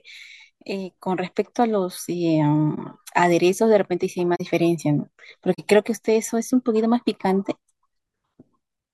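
At 2.75 to 2.78 s, 4.35 to 4.41 s and 5.53 to 5.59 s the speech has a corrupt frame concealed. The decoder caught damaged data and papered over it, two frames each time.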